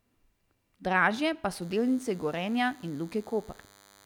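From 1.61 s to the end, a thin, steady buzz sits well beneath the speech: DECT cordless phone buzz, from 100 Hz radio bursts rectified by the audio circuit.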